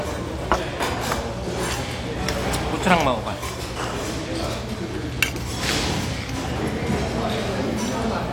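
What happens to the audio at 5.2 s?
Nothing goes wrong at 5.2 s; the sound carries on intact through that moment, with no dropout, click, distortion or other fault.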